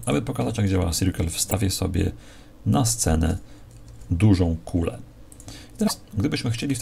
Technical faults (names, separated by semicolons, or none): broken MP3 bit reservoir